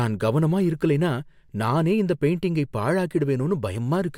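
No technical faults can be heard anywhere in the speech.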